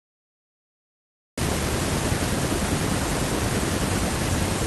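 Cut-off start at 1.38 s in this speech recording: digital silence runs from the beginning, then the sound begins mid-utterance with no natural attack, because capture started late.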